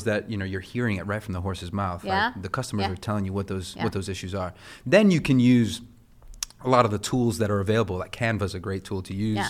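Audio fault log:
No faults detected in this speech recording.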